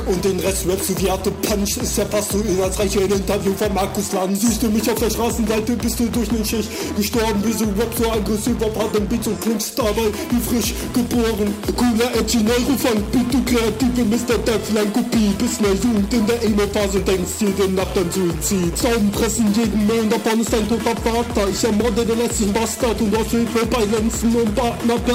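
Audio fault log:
No faults heard anywhere in the audio.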